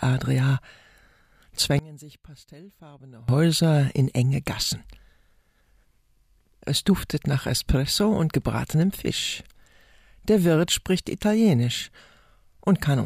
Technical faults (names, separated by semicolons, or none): one channel inverted